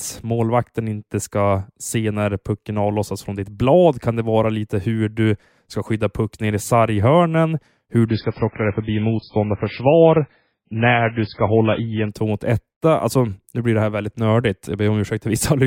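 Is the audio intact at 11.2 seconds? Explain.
No. From 8.08 to 12.08 s the adaptive stream switched to a lower bitrate after the connection slowed, with the thin, band-limited sound fitting a drop from about 128 to 16 kbit/s MP3. The speech abruptly loses everything above 5.2 kHz and sounds dull and smeared, without any gap.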